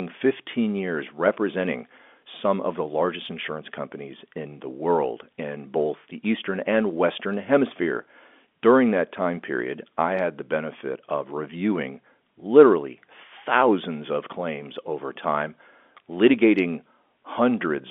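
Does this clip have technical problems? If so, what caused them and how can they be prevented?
No, there is nothing to fix or prevent here: the speech sits in the narrow band of roughly 250 Hz to 3.5 kHz typical of ordinary G.711 telephone coding, which is that channel working as designed.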